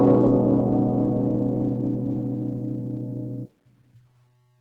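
Music running the whole clip through what is likely low-rate Opus compression, its hybrid speech-oriented mode fitting a bitrate near 16 kbps, so the tones come out muffled, hoarse and grainy, clearly damaged throughout, though the band still reaches about 20.1 kHz.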